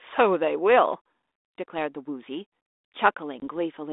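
At 3.40 s the speech breaks for about 20 ms, ending at 3.43 s, a single clean-edged hole that fits one lost packet. That is packet loss on an ADPCM call, heard through a 32 kbit/s G.726 line. Unlike a plain dropout, the gap leaves the decoder's adaptive predictor and step size out of step with the sender's, so speech resumes with brief, slight distortion that settles within some tens of milliseconds.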